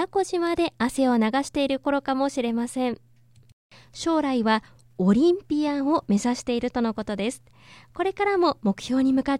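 A bit error spike at 0.47 s puts one sharp tick into this speech recording. A single flipped bit, in memory or on a digital link, pushed three consecutive samples to a value off by a power of two before they snapped back. The peak reaches about -25 dBFS. Because the jump is so brief and unrelated to the speech waveform, its energy spreads across the whole spectrum and is heard as a click with no pitch.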